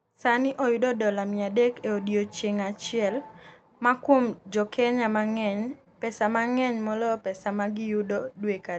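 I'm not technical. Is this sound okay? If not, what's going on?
No. At about 5.84 to 5.88 s, just before "pesa ma ng’eny moloyo", there is a short concealed packet loss. On this call line, which trims the sound above about 8 kHz, roughly 20 ms of audio never arrived in time. The receiving end covered the hole by stretching out the sound just before it, then eased back in. That is why you hear a quick smear or wobble instead of a silent gap or sharp click, as a plain dropout would give.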